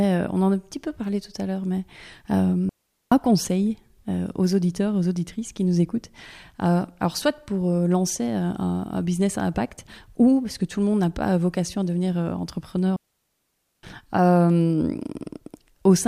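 At 2.69 s the speech drops into a digital wireless dropout lasting 0.42 s. A second, longer one follows at 12.96 s, lasting 0.87 s. Each time the link lost too much data, so the receiver muted with a very quick fade. Each sounds like a clean hole with no noise burst.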